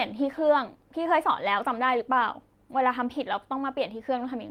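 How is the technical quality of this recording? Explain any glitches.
No glitches or dropouts can be heard in this recording.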